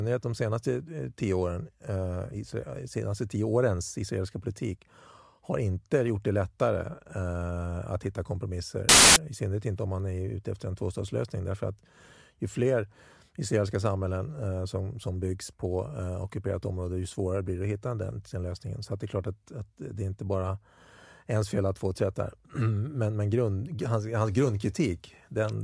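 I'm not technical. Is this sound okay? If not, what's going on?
No. At 8.89 s a loud burst of static cuts in. It stops abruptly at 9.16 s, just before "I synnerhet inte om". This is file tags played as audio. The cover picture stored inside the file was mistakenly played as sound.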